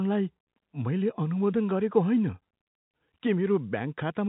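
The speech shows no technical faults, with the G.711 telephone coding working as it should: the band stops at 4 kHz and any quantisation noise is faint and follows the level of the signal.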